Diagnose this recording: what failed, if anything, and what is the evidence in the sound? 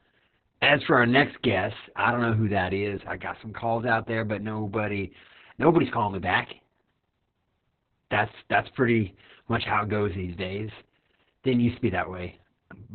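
The failure is at the codec stage: heavy Opus voice compression for the whole clip. The speech is muffled, hoarse and slightly robotic, with nothing above about 4.4 kHz, which points to narrowband SILK running near 6 kbps. At that rate the linear-prediction coder keeps only the rough spectral envelope and quantises the excitation coarsely. On a spectrogram the energy stops at a flat ceiling near 4.4 kHz, and the harmonics look smeared and grainy rather than crisp.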